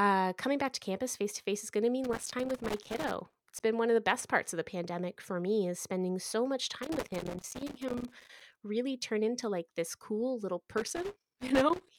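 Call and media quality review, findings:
Loose connector crackle: worn or dirty contact intermittently breaking the line, chopping the signal; irregular crackle bursts over the speech at 2.04–3.60 s, 6.83–8.62 s, and 10.78 s to end.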